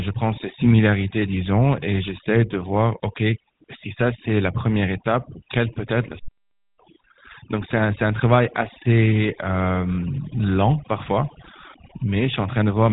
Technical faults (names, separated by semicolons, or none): overdone noise removal; GSM full-rate codec; playback stall